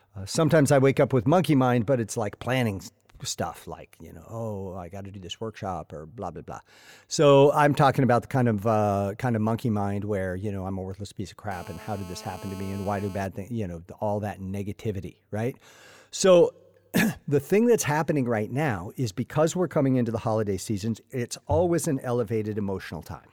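GSM phone buzz runs from 11.51 to 13.27 s in this speech clip: a hard, raspy buzz at 217 Hz, heavy with harmonics and sitting about 20 dB below the speech. A 2G phone close to the equipment was transmitting in bursts 217 times a second, and the audio circuitry rectified those radio pulses into audible sound. Because the phone was on a call, the buzz is nearly steady, with no link to the speech around it.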